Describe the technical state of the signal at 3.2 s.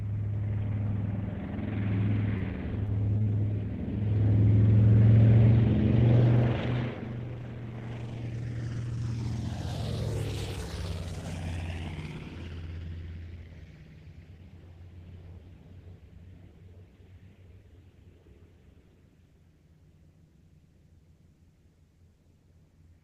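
Short concealed packet loss runs from 3.18 to 3.28 s in two back-to-back gaps: about 20 ms missing from 3.18 to 3.22 s, then 40 ms from 3.22 to 3.28 s. The audio for those spans never reached the decoder in time, so the receiver filled each hole by extending the preceding sound, repeating its periodic pattern or shaping noise to match it, and then blending back into the real signal. The result is a brief smear or wobble lasting about a tenth of a second.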